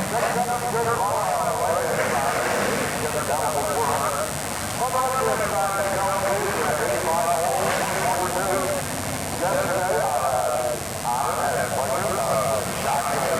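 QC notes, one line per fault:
Throughout: mains buzz. A steady, raspy buzz sits under the audio for the whole clip, at roughly 10 dB below the signal. Sharp switching spikes from a 50 Hz supply arrive twice per cycle. Their harmonics stack up from 100 Hz into the kilohertz range.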